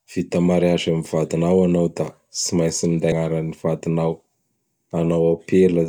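At 3.12 s, damaged data in a compressed stream makes the decoder lose sync and hunt for the next frame, producing a brief blip; a spectrogram shows a thin broadband vertical streak.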